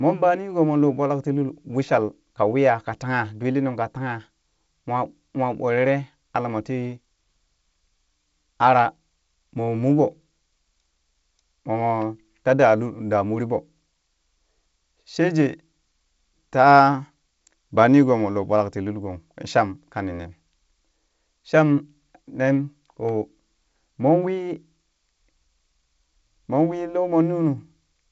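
Speech recording with no audible technical faults.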